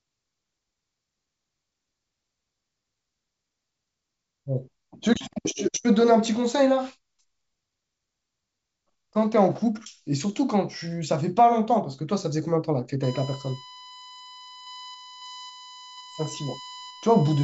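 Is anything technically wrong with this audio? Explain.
Yes. From 13.03 s to the end at 17.44 s, a USB whine appears: a steady 1 kHz tone roughly 20 dB below the speech. It comes from current drawn in 1 ms bus frames leaking into the audio through shared power or ground, hence the fixed pitch.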